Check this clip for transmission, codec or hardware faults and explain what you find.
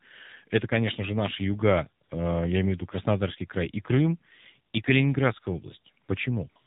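Two faults here, both typical of a mobile call path.

The AMR narrowband mobile codec affects the whole clip. Nothing above 4 kHz survives, and the speech has a buzzy, synthetic edge. That fits a low AMR-NB mode around 7.4 kbps, where a coarse vocal-tract model driven by a few pulses stands in for the real waveform.

AMR comfort noise appears in three short gaps: 2.04 to 2.10 s, just after "конечно же наши юга", then 6.04 to 6.08 s and 6.50 to 6.56 s. The phone stopped sending speech frames, so the far end filled each gap with smooth synthetic noise that cuts in and out against the real background.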